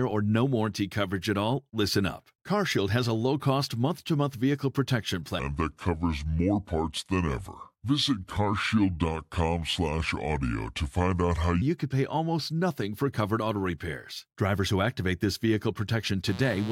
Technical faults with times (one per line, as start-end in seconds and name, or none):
5.39-11.62 section at the wrong speed
16.28-16.72 mains buzz